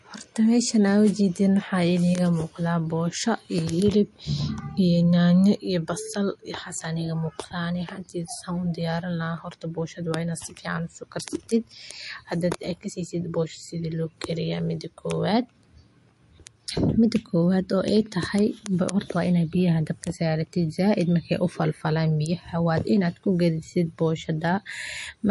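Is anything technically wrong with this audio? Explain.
Yes. Throughout the speech there is clearly audible MP3 compression damage, likely from a bit-starved encoder near 48 kbps. Treble stops at 11.3 kHz, and flickering weak lines add a watery swirl that a plain low-pass filter wouldn't produce.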